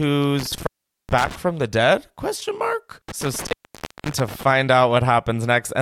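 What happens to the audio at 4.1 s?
At 4.1 s the audio is inside an intermittent contact fault running from 3.09 to 4.43 s. A loose cable or plug briefly loses connection. The signal drops out for about 0.58 s, with crackle at each edge and faint hiss while open.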